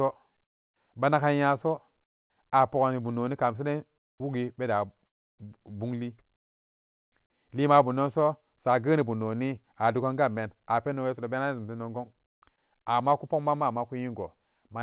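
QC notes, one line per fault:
0.44–0.76 s, 2.04–2.3 s (just before "a pogani bum noni"), 3.98–4.2 s (before "wugi beda"), 6.36–7.12 s (before "lima bumdonso sageni bum") and 12.26–12.42 s, comfort noise in place of the background: in these pauses the faint background becomes a steady, featureless hiss, about 22, 26, 1, 29 and 23 dB quieter respectively. The likely cause is the sender stopping transmission during silence, with the receiver filling each gap with synthetic noise, all within the narrowband call audio that stops at 4 kHz.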